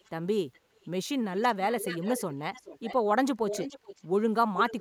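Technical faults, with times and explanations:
0.0–0.11, 0.53–0.86, 1.38–1.46, 1.79–2.34, 2.54–2.96, 3.48–4.02 and 4.55–4.8 s, echo leak: likely a loudspeaker-side echo canceller failing to remove its microphone pickup, so a copy of the speech returns about 420 ms late. The copy grows from barely audible to nearly as loud as the speech.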